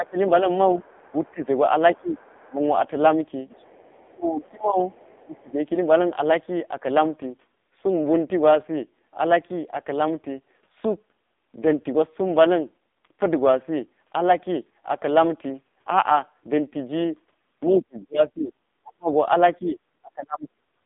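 Throughout, the speech carries heavy AMR narrowband mobile codec damage: nothing passes above 3.6 kHz, and the buzzy, synthetic texture points to a low mode near 5.9 kbps rather than simple band-limiting. From 2.18 to 2.49 s, a very faint second voice slips underneath, likely the other side's voice leaking through past the echo canceller. Unlike codec warble, it is a separate talker. From 4.11 to 5.58 s, the speech dips by up to about 25 dB in pieces totalling roughly a second, likely speech suppressed in double talk. These are gated drops, not codec dropouts.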